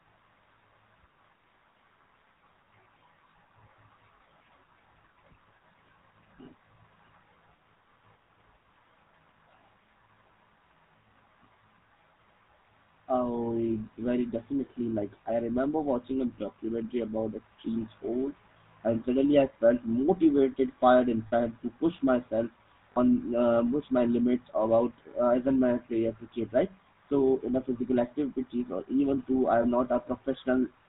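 From the start, the speech carries the buzzy, gravelly roughness of the GSM full-rate codec, consistent with its 13 kbps coding. A spectrogram shows nothing above 4 kHz and a coarse, pulse-driven harmonic texture, because the excitation is rebuilt from sparse, regularly spaced pulses.

Lost GSM frames occur at 21.28–21.32 s, 22.92–22.98 s and 29.62 s. The decoder repeats the last good frame, which produces a brief metallic ring. On a spectrogram each appears as a 20–40 ms smeared, frozen spectral slice.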